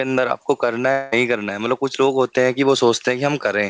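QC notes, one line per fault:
0.92–1.14 s, long network dropout: the speech gives way to a smeared, buzzy continuation of the last sound that fades across the gap, with no clean silence before the speech resumes further on, minus the stretch that was lost. This is likely a burst of lost packets on the call path, where the receiver's concealment stretched the previous audio to cover a hole of about 200 ms. Through the G.722 codec, that fill stays below 8 kHz.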